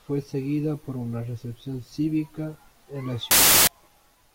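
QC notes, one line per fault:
3.31–3.67 s: samples built from the wrong bytes. For about 0.36 s near the end of the speech, each sample's bytes are assembled in the wrong order or with a one-byte misalignment, so the rapidly fluctuating low-order bits end up as the dominant part of every value. The result is a burst of loud, harsh broadband noise. On a waveform it shows as a dense block; on a spectrogram, a flat wideband smear covering all frequencies.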